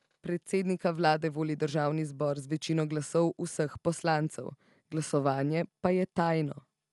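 From start to finish the speech sounds dull, with nothing above 11.4 kHz, and a rough, fluttering grain clings to voiced sounds, which points to likely Dolby Digital compression at a low bitrate, around 64 kbps. The encoder narrowed the band and gave many frequency lines no mantissa bits, so the decoder filled them with dither noise. A spectrogram shows a hard ceiling at 11.4 kHz and speckled noise between harmonics; the waveform looks normal.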